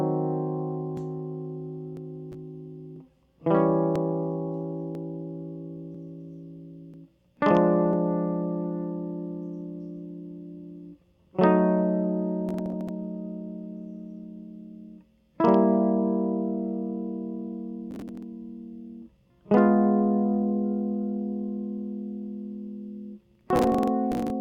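An overlap between stream segments has occurred in this music: adjacent segments of about 1 s each carry time stamps that overlap, so the player discards a few milliseconds of audio that was never actually duplicated. Each splice leaves a sudden jump in the waveform, heard as a small click or skip at 0.97, 1.97, 2.96, 3.96, 4.95, 5.95, 6.94 and 7.93 s, a steady once-per-second tick matching the segment length.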